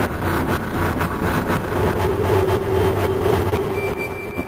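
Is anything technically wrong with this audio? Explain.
Yes. Short concealed packet loss at 3.49 to 3.54 s: about 20 ms of audio arrived too late, so the decoder extended the preceding sound to bridge the gap, leaving a brief smear.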